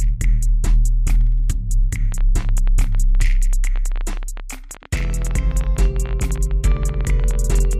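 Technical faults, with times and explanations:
2.12 to 7.74 s, train of clicks: Sharp pulses start at 2.12 s and run almost to the end. They come about 14.4 times per second, around seventy in all. The spacing is uneven, so they sound like a rough, stuttering tick. Each click has much the same shape. Their peaks are about as loud as the sound itself. They cut through quiet gaps too. Interference from nearby equipment or a faulty connection is the likely source.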